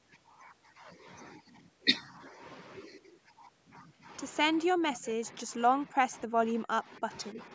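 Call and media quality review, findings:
Speech ducks and breaks up from 4.71 to 5.51 s, 5.74 to 6.38 s, 6.63 to 7.09 s and 7.32 to 7.39 s, dropping by up to about 35 dB. Likely speech suppressed in double talk: the echo canceller mistook near-end speech for echo.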